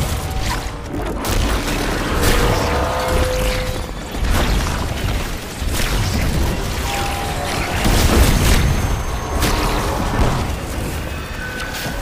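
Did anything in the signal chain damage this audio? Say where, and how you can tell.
Yes. A train of clicks runs from 2.43 to 3.98 s: about twenty similar pops at roughly 13 per second, unevenly spaced and clearly louder than the sound. Similar, uneven pulses point to the analogue wiring or interface, likely picking up interference from nearby equipment.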